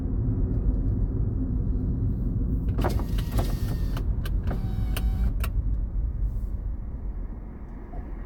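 No technical faults are audible.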